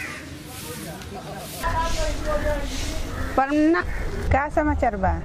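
The audio points to a stream segment skipped, most likely because one segment of the segmented stream failed to load and the player went straight on to the next. At 3.80 to 3.85 s the sound jumps ahead with a short blip at the join, and the missing part of the programme never comes back.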